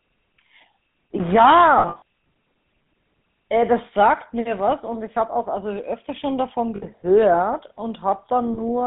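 Speech heard through the GSM full-rate codec: the whole clip has a buzzy, gravelly roughness and nothing above about 3.7 kHz or below 150 Hz, which fits the 13 kbps full-rate coder rather than a simple band-limited phone line, which would sound dull but not gritty. Lost GSM frames produce a rough, metallic ring where the last good frame is held and repeated. This happens between 1.78 and 2.02 s, where about 180 ms is lost in bursts of up to roughly 70 ms, and again at 6.76 to 6.85 s and 8.54 to 8.61 s. The ringing tone sets these apart from the silent gaps of plain dropouts.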